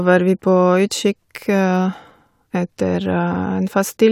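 Nothing technically wrong turns up anywhere in this short stretch of speech, so there's no fault to time or trace to a cause.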